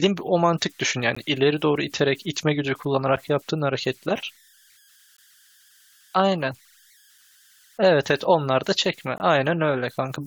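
Speech carries converter idle tones throughout: a faint whistle around 1.5 kHz, about 36 dB below the signal, from an undithered delta-sigma converter, visible as a thin horizontal spectrogram line. Gaps between stream segments punch hard-edged silences at 1.15, 3.16, 5.17, 7.18 and 9.18 to 9.20 s, every 2 s, showing as flat silent notches in the waveform.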